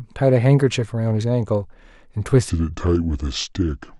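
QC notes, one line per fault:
2.5 to 4.0 s, section at the wrong speed: speech abruptly drops deep and dragging, about seven semitones lower at 0.707x speed, likely from playback against the wrong clock.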